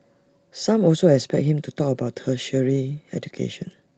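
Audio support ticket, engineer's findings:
No faults found: continuous, intact speech signal, band-limited to 8 kHz with the lowest bass rolled off, consistent with normal call microphone processing and an Opus WebRTC call path at a wideband setting.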